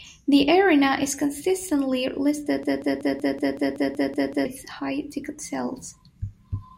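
At 2.63 s, right after "arena is consistently", the playback chain likely stalled and kept re-sending the last fragment it held, producing a broken-record loop. A slice of about 0.19 s repeats exactly, back to back, ten times until 4.45 s, giving a rapid mechanical stutter at roughly five repeats per second. Whatever should have played during those 1.8 s is gone, and the audio resumes abruptly at "high ticket".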